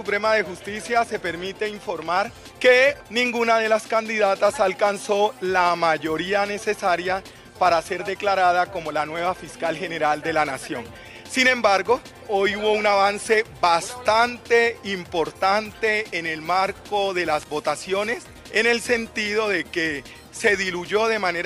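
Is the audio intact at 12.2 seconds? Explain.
Yes, the audio plays through 12.2 seconds intact, with no dropout, click, glitch or other fault at that moment.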